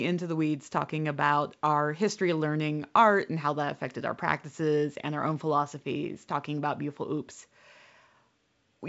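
The speech carries the character of G.722 wideband telephone coding at 64 kbit/s, with nothing above about 7.7 kHz and the coding itself at most faintly audible, and no technical faults can be heard.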